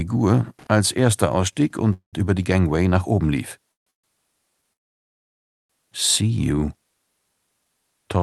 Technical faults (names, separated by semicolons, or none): loose connector crackle; call audio freeze